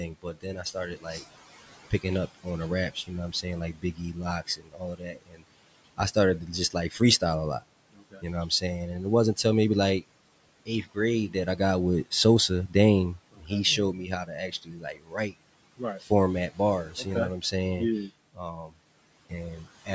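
From the start of the clip, noise suppressor artifacts are present. The room noise, sitting about 19 dB under the speech, is pulled down by about 18 dB in the gaps and rises back under each phrase. The floor breathes with the speech rather than holding steady. A plain gate would instead leave silence or full noise with nothing in between.

Speech cut by the noise suppressor happens in four stretches, at 0.22 to 1.24 s, at 1.91 to 9.45 s just before "maybe like", at 10.66 to 17.53 s just after "maybe like", and at 18.07 to 19.89 s. In these stretches quiet speech is treated as noise and lowered by about 17 to 19 dB, briefly in the first stretch and for roughly two seconds in total in each long one. Soft consonants and word endings sound swallowed. A dropout would leave clean gaps, but here the speech only fades.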